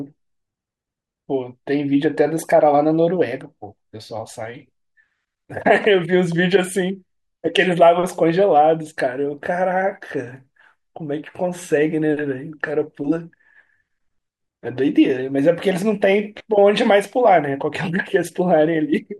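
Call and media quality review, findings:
Nothing stood out on listening to the speech in this recording.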